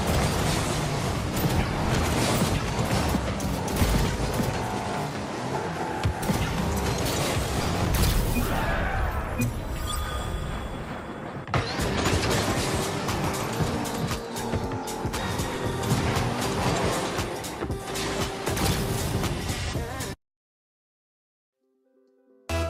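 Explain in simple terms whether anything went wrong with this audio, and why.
Nothing went wrong here; no faults can be heard.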